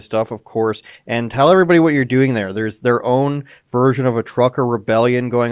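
No technical faults can be heard anywhere in the recording; the signal stays intact and continuous throughout.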